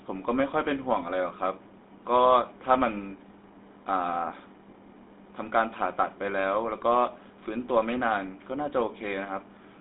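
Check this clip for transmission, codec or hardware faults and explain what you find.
The speech carries GSM full-rate codec damage for its whole length, and it is plainly audible. Everything above about 3.9 kHz is gone, and the sound sits in a telephone band of roughly 200 Hz to 3.7 kHz, which fits the 13 kbps full-rate mode. The codec models the vocal tract as a filter and excites it with a sparse, regularly spaced pulse train, discarding two of every three excitation samples. That decimated excitation gives the voice its buzzy, gravelly roughness.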